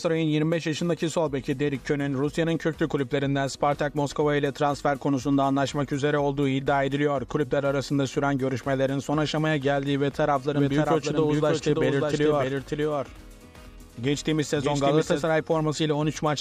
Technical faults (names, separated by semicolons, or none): doubled audio track